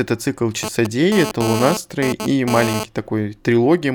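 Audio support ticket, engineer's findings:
Hard, raspy buzz from 0.63 to 2.84 s, about 6 dB under the speech, full of harmonics. GSM phone buzz: a nearby 2G handset bursting 217 times a second, with the audio stage rectifying the RF. Buzz keeps dropping in and out, pointing to a data transfer.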